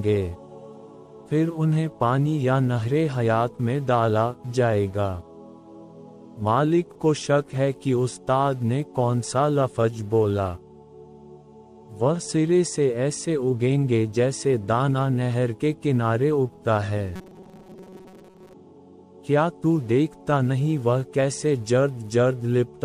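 From 17.16 to 18.54 s the sound collapses into a rigid, metallic robotic buzz near 188 Hz, most of it made of repeats. Its likely cause is repeated short buffers of about 5 ms standing in for late audio. That fixed pitch distinguishes it from codec warbling.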